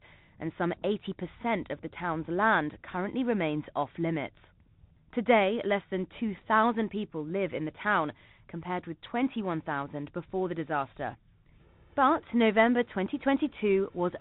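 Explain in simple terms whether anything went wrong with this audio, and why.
The whole speech clip went through a Bluetooth CVSD headset codec, which cuts everything above 4 kHz and tracks the sound one up-or-down step at a time, leaving it muffled and plainly rough.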